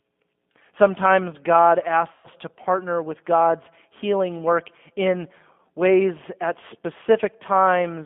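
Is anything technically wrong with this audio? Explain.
Yes, there are two problems. The whole clip has gone through a G.729 codec at 8 kbit/s, and the damage is plainly audible. It rebuilds speech from a vocal tract model, a pitch predictor and a few pulses per frame, so the sound is confined to roughly 200 Hz to 3.5 kHz, with a rough, slightly synthetic edge.

From 2.12 to 2.27 s, just before "to partner with", you can hear VoIP packet loss concealed by the speech codec. About 120 ms of audio went missing, which fits roughly six lost packets. The decoder kept extrapolating from its last pitch and filter settings, so that stretch turns into a buzzy tone or coloured noise that fades. Because each frame builds on the previous one, the speech stays weak or distorted as it recovers.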